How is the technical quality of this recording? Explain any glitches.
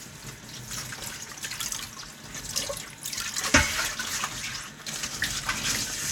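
Listening through this recording of sounds, nothing stood out as a technical problem or glitch.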